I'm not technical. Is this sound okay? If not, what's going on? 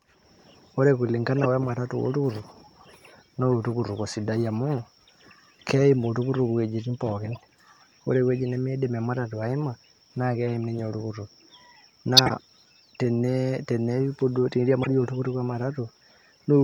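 No. Corrupt frame decoded at 1.39 to 1.46, 7.31 to 7.37, 12.17 to 12.31 and 14.83 to 14.87 seconds: damaged chunks of compressed data were played anyway, causing brief chirps or noise bursts.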